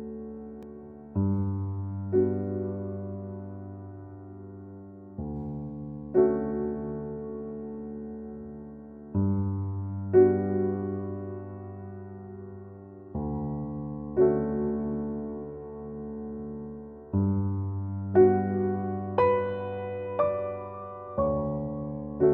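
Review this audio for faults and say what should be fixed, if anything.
At 0.63 s there is a block of digital silence: for about 1.45 ms the signal drops out with no fade, leaving a tick. That fits a 64-sample buffer left unfilled. A lone spike would show a jump rather than a flat gap bracketed by two edges. Giving the audio thread more headroom or a larger buffer so it always fills on time would prevent it.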